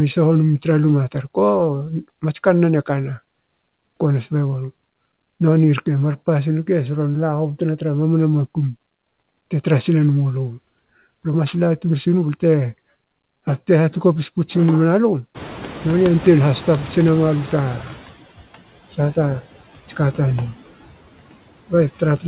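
Speech with noise suppressor artifacts throughout: the suppressor pulls the background down by about 16 dB between phrases and lets it rise again under the speech, which shows on a spectrogram as a flickering, patchy noise floor. From 15.34 to 18.02 s the noise suppressor is catching up. The room noise jumps by about 22 dB around 15.5 s and is reduced by only about 9 dB at first. It then sinks over 2.68 s as the suppressor's noise estimate adapts, drawn on the spectrogram as a bright broadband band fading away and on the waveform as a thickened floor that narrows. Nothing in the spectrogram reaches above 4 kHz, a ceiling consistent with a G.711 telephone codec.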